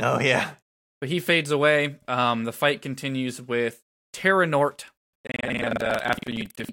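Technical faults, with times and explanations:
5.11–6.73 s, buffer tearing: writer and reader cross mid-buffer, so most of each period replays audio about a fifth of a second old, giving a 21.5 Hz rattle that fits a 2048-sample buffer.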